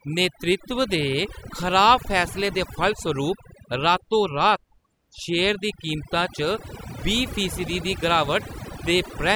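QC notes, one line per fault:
Throughout, overdone noise removal: the background drops and breaks up into twinkling specks. The noise reduction was set too strong, so it pushes bands near its noise estimate far down or off, and the quiet parts of the speech go with them.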